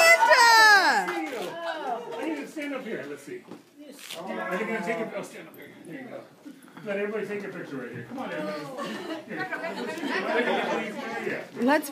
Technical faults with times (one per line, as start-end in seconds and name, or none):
none